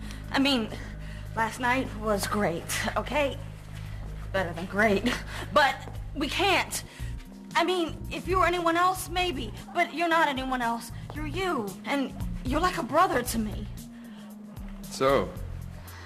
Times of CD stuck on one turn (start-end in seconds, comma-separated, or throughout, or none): none